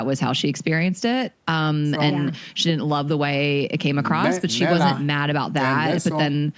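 The speech shows no technical faults: the signal has passed through a call's microphone processing, which trims away the lowest bass and leaves nothing above 8 kHz, as that path normally does.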